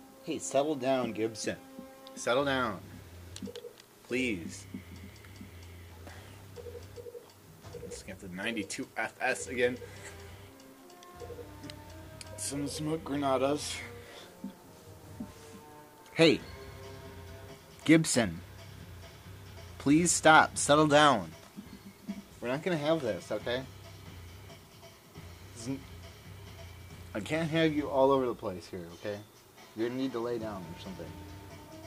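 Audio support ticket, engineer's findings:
Processor overload crackle, 6.05 to 6.61 s. Gritty burst riding on the sound, then clean. Audio processing can't keep up: dozens of very short buffers, under a millisecond each, missed repeatedly. Each gap is dropped to silence with hard edges.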